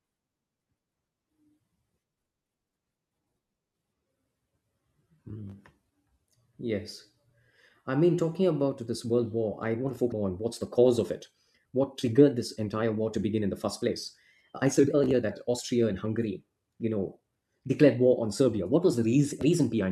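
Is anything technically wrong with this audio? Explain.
Yes. There are two kinds of fault.

From 8.62 s, just after "I mean talking", to the end, the speech abruptly runs about 1.5 times faster while the pitch stays the same. This is a time-stretched section. The likely cause is software squeezing the audio to fit a shorter length and dropping short pieces to keep the pitch steady. The result sounds rushed.

At 10.11 s and again at 19.41 s there is a brief squawk or blip. This is damaged data in a compressed stream. Bad bytes there made the decoder misread the frames and lose sync. It then searched for the next valid frame header. Each glitch lasts under 20 ms.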